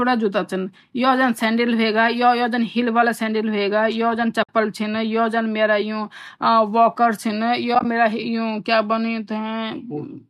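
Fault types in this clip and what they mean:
AAC frame loss with muting: coded frames went missing and the decoder zeroed their spectrum, so the overlapping windows fade the speech out and back in. A soft 60 ms hole opens at 4.43 s, then about 50 ms of short dropouts scatter over 7.75 to 7.85 s, likely in a low-delay AAC stream.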